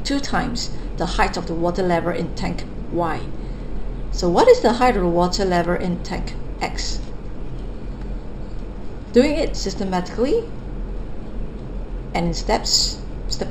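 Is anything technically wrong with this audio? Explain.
Yes. Imaging from linear upsampling runs throughout: the rate appears raised from about 12 kHz to 44.1 kHz by straight-line interpolation, which dulls the top of the band. A faint mirrored image around 20 dB down fills 6 to 12 kHz, adding metallic shimmer to bright sounds, and shows on a spectrogram as flipped content above 6 kHz.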